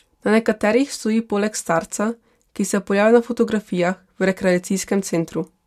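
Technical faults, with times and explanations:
Nothing stood out on listening to this speech recording.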